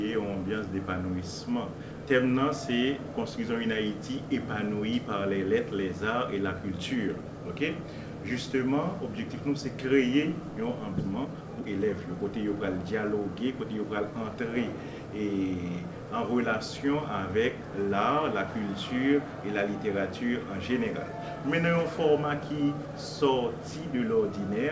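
At 10.98 s a block of audio was dropped, roughly a second of it, while later packets were already waiting, and playback jumped straight to them. This skip ahead leaves no filler and no pause. The sound on either side of the cut is spliced almost directly, so the sound lurches forward abruptly and a chunk of material is simply gone.

Immediately afterwards, from 11.15 s to 13.85 s, the buffer was still holding more than its target delay. It kept trimming short pitch-period-sized pieces, around 0.4 s in total, to catch up. This jitter buffer speed-up makes the audio run at about 116% speed with its pitch unchanged, so that stretch sounds hurried and rushed.

Throughout the clip the audio is band-limited with nothing above 8 kHz, which fits a G.722 wideband call codec.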